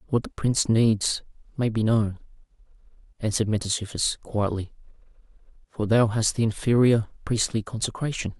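Speech carries a run of clock slip clicks from 0.35 s to 8.34 s. They are faint, regular ticks, roughly one every half second, about fifteen in all. The steady spacing is the giveaway. Each tick fits a single sample being dropped or repeated. The likely cause is two devices running on separate, unsynchronised clocks, differing by something like 40 parts per million. Each time that drift adds up to a whole sample, the stream slips and a tick results.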